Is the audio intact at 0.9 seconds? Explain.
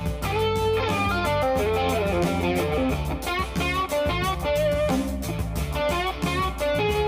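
No. One channel runs about 10 ms behind the other, and when the two are summed to mono the shared content cancels at evenly spaced frequencies from about 40 Hz upward. This channel delay (comb filtering) persists throughout, so 0.9 s sounds hollow and phasey.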